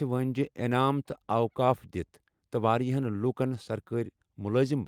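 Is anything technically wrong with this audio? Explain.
No, the speech signal shows no technical faults anywhere in the clip.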